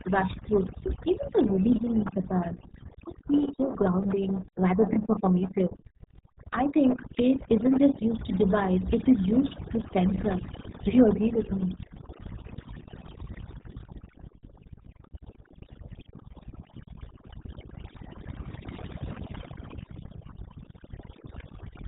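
Throughout the clip, overdone noise removal has been applied: a noise reduction stage set far too aggressively shuts down individual frequency bands whenever they sit near its noise estimate, taking quiet parts of the speech with them. Pauses fall to near silence sprinkled with twinkling specks.

Also throughout, the speech has passed through the RealAudio 14.4 codec, whose 8 kbit/s stream does heavy damage. Everything above about 3.8 kHz is gone, so consonants lose their edge and the voice comes out muffled, with a gargling, bubbly texture.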